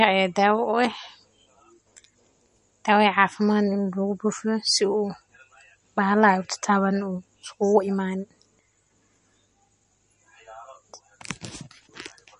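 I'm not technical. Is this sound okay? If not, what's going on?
No. MP3 compression damage runs through the whole speech clip, likely from heavy encoding. Nothing above about 10.6 kHz survives, so s sounds lose their crispness, and faint detail flickers in and out, giving a watery, swirly quality.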